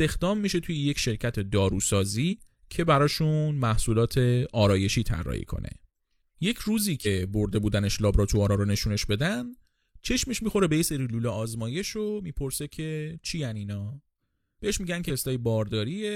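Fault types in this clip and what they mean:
Compressed frames skipped: at 2.28, 7.02 and 15.05 s, whole 46.4 ms frames go missing, so the speech jumps ahead roughly 100, 100 and 200 ms.
One channel drops out: from 10.87 s the speech level falls abruptly by about 6 dB, likely because one stereo channel is lost before mono summing.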